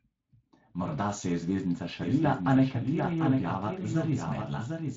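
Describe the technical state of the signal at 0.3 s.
At 0.3 s the speech is passing through the Speex codec, as it does for the whole clip. Its CELP coder has limited bits for the excitation, consistent with a rate near 20 kbps, so the speech sounds plainly hoarse and grainy.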